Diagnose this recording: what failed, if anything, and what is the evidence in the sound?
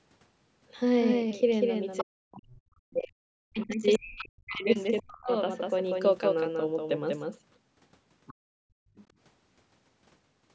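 Doubled audio track, throughout: a full-band copy of the speech trails the original by about a fifth of a second, some 5 dB quieter, with no decay or room colour. This likely comes from a second, slower capture path or an edit holding two copies out of step.

Other side's voice leaking through, at 1.98–2.04 s, 3.59–4.6 s, 4.98–5.02 s, 8.27–8.34 s and 8.96–9.04 s: a second voice sits about 15 to 30 dB below the talker. This is likely loudspeaker playback reaching the microphone that the call's echo canceller failed to remove.

Speech suppressed in double talk, from 2.03 to 5.3 s: the talker's level dips, by up to about 40 dB, over roughly three seconds while the far side is also heard. The echo canceller likely mistook the overlapping talk for echo and attenuated both.

Background gated by the echo canceller, from 8.34 to 8.96 s: the room sound drops away by up to about 38 dB for roughly half a second, between two echo fragments, and returns once the canceller releases its suppression of the microphone.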